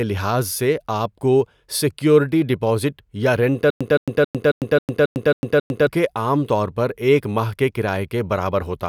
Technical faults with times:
3.70-5.87 stutter with silent gaps

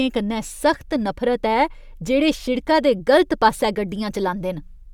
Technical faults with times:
none

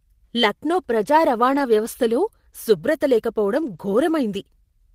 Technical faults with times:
1.51-1.61 lost packet rebuilt from error correction
3.61-3.87 lost packet rebuilt from error correction

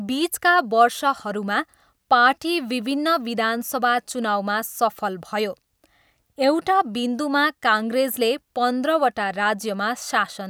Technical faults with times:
none

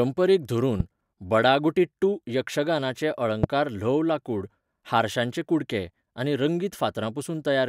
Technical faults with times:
0.80-0.82 loud pop
3.43-3.46 loud pop

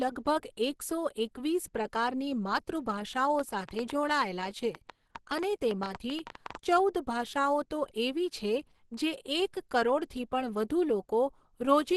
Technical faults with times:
0.00-11.97 Opus compression
3.39-6.56 train of clicks

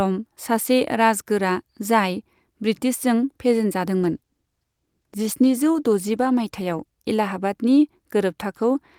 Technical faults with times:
4.01-6.97 call bitrate drop

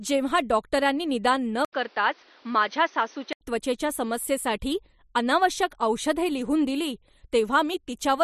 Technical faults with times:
1.65-3.41 input switched to a poorer device

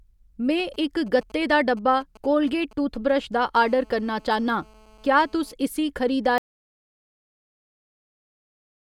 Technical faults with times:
0.59-3.67 GSM signalling bursts
3.68-5.54 GSM phone buzz
6.38-8.91 audio dropout to silence

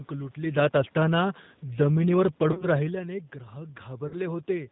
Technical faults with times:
0.00-4.72 G.729 codec
2.52-2.66 VoIP packet loss concealed by the speech codec
4.08-4.17 VoIP packet loss concealed by the speech codec

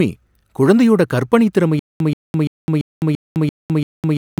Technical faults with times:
1.79-4.40 stutter with silent gaps

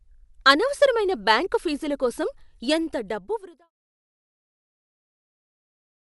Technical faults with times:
0.00-6.14 Dolby Digital compression

